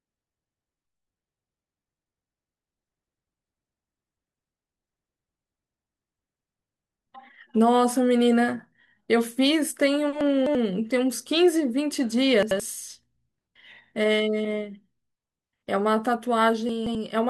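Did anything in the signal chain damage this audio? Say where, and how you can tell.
Yes. Chunks out of order at the buffer stage: around 10.21–10.55 s, 12.43–12.60 s and 16.69–16.95 s the sound jumbles, with three hard joins. An 85 ms chunk lands three, one and two chunks late.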